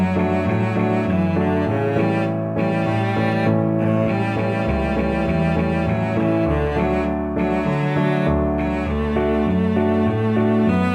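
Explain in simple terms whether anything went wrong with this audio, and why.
The clock that tells the converter when to take each sample was unsteady throughout the clip, drifting early or late at random by around a microsecond or two. That is sample clock jitter. Because each sample lands slightly off time, the error grows whenever the waveform changes quickly, so a faint hiss or roughness rides on the louder and brighter parts of the sound and fades away when things go quiet.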